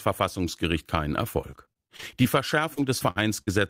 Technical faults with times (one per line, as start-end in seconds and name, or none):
1.41-2.26 repeated packet loss (robotic sound)
2.74-3.49 repeated packet loss (robotic sound)